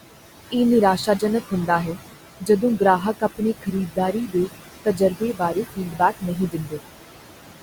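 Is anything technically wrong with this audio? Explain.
Yes. Noise suppressor artifacts run through the whole clip. The suppressor turns down the room noise by about 17 dB, frame by frame. That noise, about 12 dB below the speech, drops away in pauses and rises under speech.

Speech cut by the noise suppressor occurs from 3.89 to 4.49 s and from 4.85 to 6.82 s. The suppressor mistook speech for noise. It cut up to about 16 dB, then about 18 dB. Roughly 1.2 s in total is affected. Those parts sound faint and swallowed.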